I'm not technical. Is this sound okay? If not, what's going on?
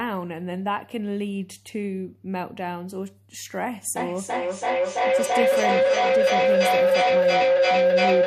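No. From about 3.96 s to the end, the clip has feedback howl. Two devices on the same call in one room are feeding each other: one device's loudspeaker is picked up by the other's microphone and played back louder on each trip. The sound keeps coming back roughly every third of a second and narrows into a steady mid-pitched tone near 500 Hz, ending up louder than the speech. It stops only when one device is muted.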